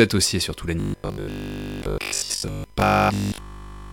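From the very start there's a USB whine, a steady 1 kHz tone sitting about 40 dB under the speech. It's current drawn in the bus's 1 ms frames leaking in through power or ground, so the pitch never moves.

From 0.8 s through to the end, the speech turns robotic, a rigid metallic buzz at 50 Hz that only loosely tracks the talking. That's likely from repeated short buffers, with a 20 ms chunk replayed over and over while essentially all the real audio gets skipped.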